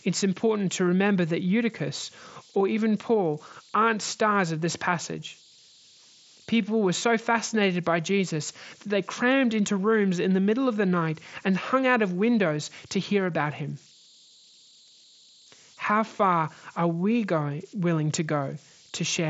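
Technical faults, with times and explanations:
Throughout, converter idle tones: a faint whistle around 4 kHz sits about 30 dB under the speech, easiest to catch in pauses. Without dither, the delta-sigma converter falls into repeating bit patterns when the input is small, and those cycles come out as a steady tone.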